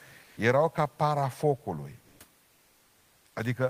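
In three pauses the room's real background turns into a flat, featureless hiss: 0.23 to 0.37 s before "ca parafocului" (about 2 dB louder), then 2.01 to 2.19 s (about 4 dB louder) and 2.43 to 3.35 s (about 2 dB quieter). This is comfort noise in place of the background, likely discontinuous transmission filling silences with synthetic noise.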